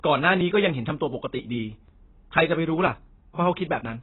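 Throughout the speech, nothing sits above 4 kHz, and the spectrogram shows a hard ceiling. The dull, warbling result is likely heavy AAC compression at a very low bitrate.

From 0.41 to 3.85 s, periodic USB or driver dropouts skip about 10 ms of audio every 0.49 s. They cause regular ticks and show as abrupt waveform discontinuities.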